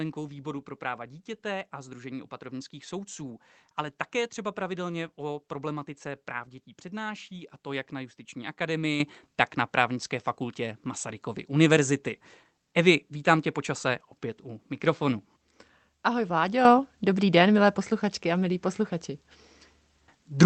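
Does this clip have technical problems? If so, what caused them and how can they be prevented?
Yes. A microphone volume step-up occurs at 9.0 s (about 9 dB) and again at 16.65 s (about 7 dB). Both times the speech and the background noise jump louder together, which points to the call software raising the microphone's input volume in one step, not to the talker moving closer. Through the call codec, the audio tops out near 8 kHz. To prevent it, turn off the call app's automatic microphone level adjustment and set the input gain manually before recording.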